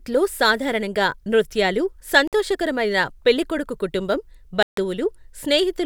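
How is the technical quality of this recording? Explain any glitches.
The speech is cut by two short silent gaps. After "సాధారణంగా నృత్యాలు" (2.28 to 2.33 s) and after "పెళ్లికొడుకు కుటుంబం" (4.63 to 4.77 s), a Bluetooth dropout, likely from audio packets arriving too late and being discarded, silences the sound abruptly for 53 ms and then 147 ms. Each time it resumes further along, as if it had kept playing.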